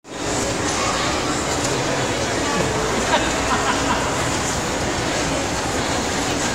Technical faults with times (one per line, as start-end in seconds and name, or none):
2.57-2.61 damaged data in a compressed stream